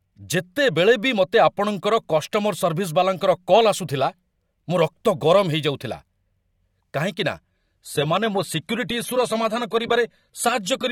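Adaptive stream at a lower bitrate from 7.37 s to the end: the player switched to a leaner version, which fits AAC falling from 96 to 32 kbit/s. The speech abruptly loses everything above 14.1 kHz and turns grainier, without any gap.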